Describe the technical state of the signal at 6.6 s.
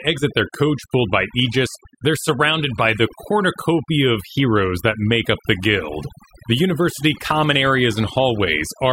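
At 6.6 s the speech is still under the overdone noise removal that runs through the whole clip. The noise reduction was set far too aggressively, so every frequency band sitting near its noise estimate is pushed down hard or shut off entirely, and the softer parts of the voice are cut along with the noise. The background drops and breaks up into twinkling, warbling specks.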